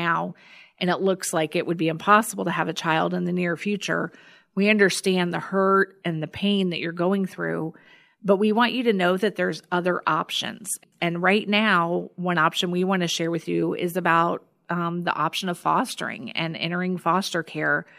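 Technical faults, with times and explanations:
No technical faults can be heard anywhere in this speech.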